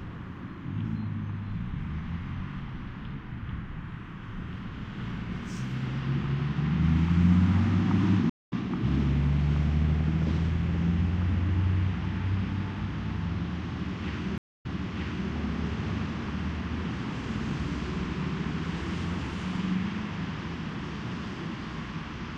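A clip of everyday sounds with two stream reconnect dropouts. At 8.30 to 8.53 s it goes silent for 180 ms, then the audio comes back roughly a fifth of a second further on, so a small slice is simply missing. At 14.38 to 15.31 s there's a 227 ms gap, and this time it resumes 705 ms earlier and replays that stretch. Both times the connection dropped, the player reconnected and started a fresh decoder mid-stream, and on the second one the server resent a burst of audio.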